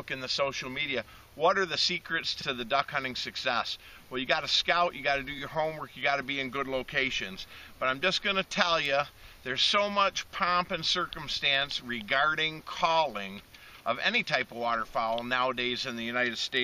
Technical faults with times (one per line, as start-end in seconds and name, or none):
2.40-2.45 repeated frames